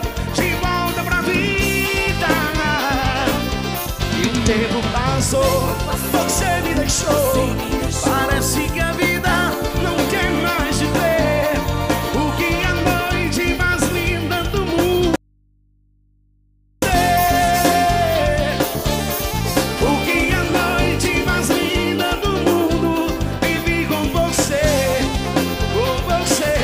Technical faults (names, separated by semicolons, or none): audio dropout to a faint residue